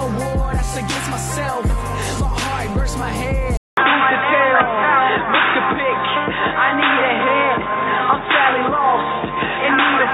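At 3.57 s the audio drops out for 200 ms, and from there to the end the character of the sound changes. Nothing remains above 3.8 kHz, so the top end is gone and the sound turns dull and boxy. The level shifts by about 5 dB, and a new background noise sits roughly 30 dB below the signal. The likely cause is that the input switched to a poorer device, one with a narrower band, its own gain and its own noise floor.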